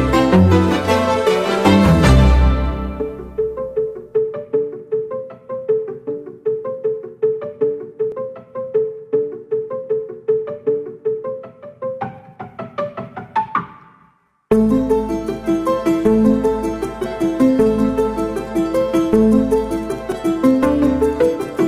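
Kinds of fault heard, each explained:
Dropped buffer (overrun): the program likely failed to read its samples before the hardware overwrote them, so a piece is lost and the edges join directly. Around 20 ms vanishes at 8.12 s and around 40 ms at 20.12 s, each heard as a skip forward.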